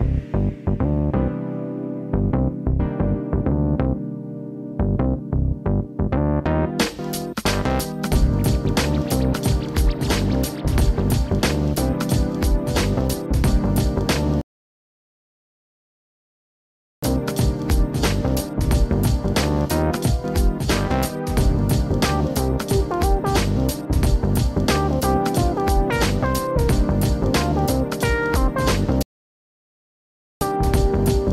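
Twice the player exhausts its downloaded audio and halts until more data arrives, a rebuffering stall. At 14.41 s the sound drops to silence for 2.61 s, and again at 29.03 s for 1.38 s, each time picking up exactly where it stopped, with nothing skipped.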